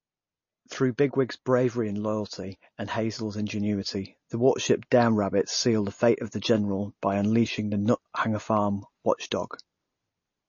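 MP3 compression runs throughout the speech and is the likely cause of what is heard. Nothing sounds above 6.9 kHz, a fixed treble cut that fits a bitrate around 32 kbps. Weak frequency lines flicker between frames, giving a plainly audible watery swirl and smeared attacks.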